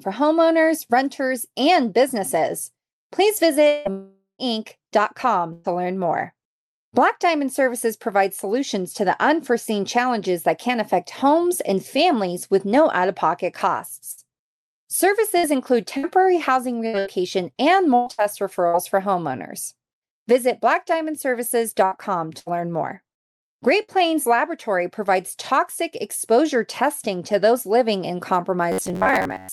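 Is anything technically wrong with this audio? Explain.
Yes, there are several faults.

Long network dropout, 3.67 to 3.88 s and 3.91 to 4.42 s: the sound stretches into a fading buzz and hiss, and the second gap ends in about 120 ms of silence before the audio returns. Roughly 180 ms and 480 ms are gone, most likely because the stream stopped arriving and the receiver could only extend the last sound.

Burst of packet loss, 5.53 to 5.73 s: the last sound is briefly held and dies away, after which the audio resumes about 120 ms further on. A run of packets went missing, and the receiver covered the hole by continuing and fading the previous sound.

Repeated packet loss (robotic sound), 14.11 to 18.76 s and 21.85 to 23.99 s: the audio turns choppy, with pieces missing. The first stretch has eight gaps, the longest 111 ms, with about 11% of it patched. The second has three, the longest 65 ms, with about 9% patched. 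Each loss is concealed just before the next one arrives.

Robotic sound from repeated short buffers, 28.72 s to the end: most of this stretch becomes a rigid buzz near 94 Hz that loosely follows the speech. The likely cause is the last 10.7 ms or so of audio being looped while fresh audio was skipped.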